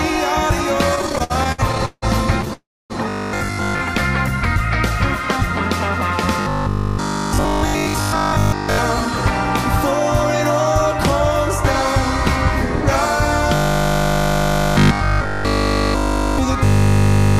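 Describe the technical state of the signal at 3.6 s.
A rigid, metallic 50 Hz buzz replaces most of the sound from 3.09 to 3.81 s: robotic sound from repeated short buffers, likely 20 ms chunks looped while real audio is skipped.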